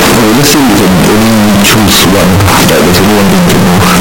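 From the very start right through to the end, the speech comes out blasting and harsh, flattened into a near-square wave at an almost fixed, high level. Classic float read as integer: 32-bit float samples likely got interpreted as 32-bit integers. Background noise sits as loud as the talking, though pitch survives.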